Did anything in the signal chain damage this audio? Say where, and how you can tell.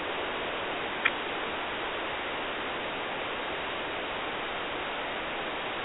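No, nothing in the chain damages this speech. The narrow band of about 300 Hz to 3.4 kHz is simply how working G.711 telephone coding sounds, which fits an ordinary 64 kbps A-law line.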